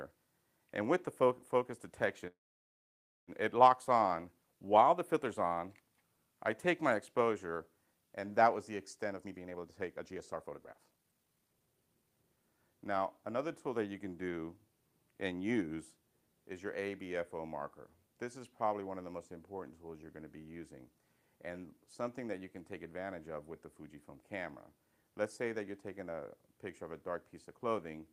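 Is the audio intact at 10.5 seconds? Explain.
No. From 9.02 to 12.38 s a jitter buffer speed-up runs the audio about 30% fast, trimming roughly a second of short pitch-period slices to drain the backlog. It sounds hurried but keeps its pitch, unlike a sample-rate mismatch, which would raise the pitch.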